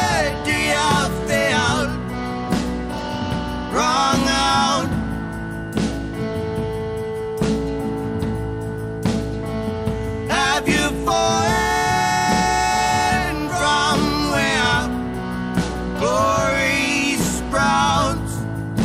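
Nothing in this audio stands out as a technical problem; it just runs along steadily, with no dropouts, clicks, glitches or level jumps anywhere.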